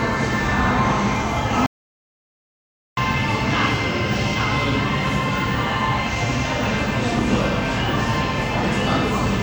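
A recording of sounds with an audio dropout to silence from 1.66 to 2.97 s: about 1.3 s of flat silent waveform and blank spectrogram, likely a lost input link.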